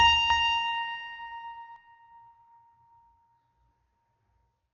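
Dolby Digital compression, throughout: the music sounds dull and rough, with nothing above 7.1 kHz, likely from AC-3-style coding at a very low bitrate, around 48 kbps, filling starved bands with noise. Doubled audio track, 0.30 to 1.76 s: a second full-band copy trails about a fifth of a second behind, a few dB quieter, likely from a duplicate capture path, starting and stopping abruptly.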